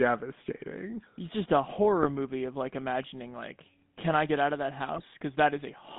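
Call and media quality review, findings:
GSM full-rate codec, whole clip: buzzy, gravelly speech band-limited to roughly 150 Hz–3.6 kHz. Regular-pulse excitation of a vocal-tract model, consistent with 13 kbps full-rate coding.

GSM bit errors, 2.02–2.07 s (after "just a", before "movie of like imagining") and 4.92–5.05 s (after "get out of that"): squawks and gargling. Corrupted filter, pitch or gain parameters distorting a few decoded frames.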